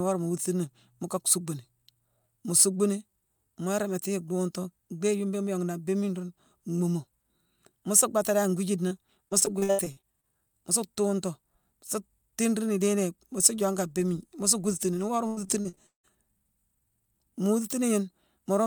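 Right after "suu bhaaté dan", around 8.87 to 8.93 s, there's a short concealed packet loss: about 40 ms of audio never arrived in time, and the decoder papered over it by stretching the previous sound before blending back in, leaving a quick smear.

Then from 9.29 to 10.25 s, ending just before "mu su tuuntu sa", you get repeated packet loss with that robotic sound. There are about ten dropouts, the longest 78 ms, and roughly a third of the stretch is synthetic fill, so it comes out choppy with pieces missing. It happens again from 15.27 to 16.11 s, this time with six dropouts, one as long as 170 ms, and nearly half the span is concealment, so it's even more broken there.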